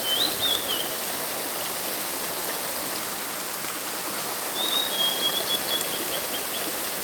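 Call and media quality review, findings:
Train of clicks, 5.41 to 7.01 s, running to the end of the audio. Roughly 20 similar short pulses at about 10.7 per second, unevenly spaced, heard as ticking over the sound and peaking about 5 dB above it. Likely cause: interference from nearby equipment or a faulty connection or power supply injecting repeated pulses into the signal path.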